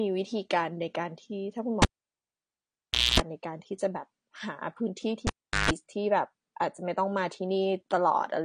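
From the start the speech sounds dull and smeared, with nothing above 15.2 kHz and plainly audible codec grit, likely AAC compression at a low bitrate, something like 32 kbps, where the coder drops the top end and starves the remaining bands.

At 1.82 s comes a cable pulled and plugged in: a pop, about 1.33 s of near silence, then roughly 0.24 s of 60 Hz mains buzz as the tip scrapes contact, and a second pop at 3.20 s. It happens again from 5.27 to 5.71 s, shorter, with about 0.39 s unplugged and 0.15 s of 50 Hz buzz.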